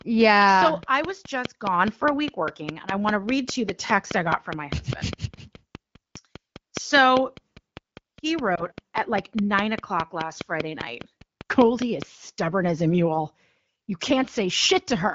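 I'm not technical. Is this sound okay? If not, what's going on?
No. There are two problems.

The first is a train of clicks. From the very start until about 12.0 seconds, a steady ticking runs under the speech. It comes about five times a second, evenly spaced, roughly 70 clicks in all. The clicks are louder than the speech itself. You hear them in the pauses too. They stop just before "stubborn as a mule". The likely cause is electrical interference from nearby equipment or a faulty connection or power supply.

The second is lost AMR speech frames. This is a phone-network problem. Between about 8.55 and 8.63 seconds, one small slice of speech, about 20 milliseconds, failed to arrive intact over the radio link. The phone's decoder filled the gap by reusing the last good sound it had, played more quietly. You hear this as a very brief dip or wobble in the voice.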